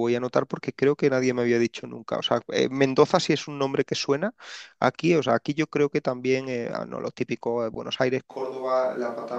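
Speech, with a switch to a distant microphone at 8.32 s that lasts to the end. The sound abruptly turns roomy and hollow, thins in the bass, and falls by about 5 dB, with room noise some 35 dB below it. The sudden added reverberation, not just lower level, separates it from a gain drop. The likely cause is loss of the close microphone.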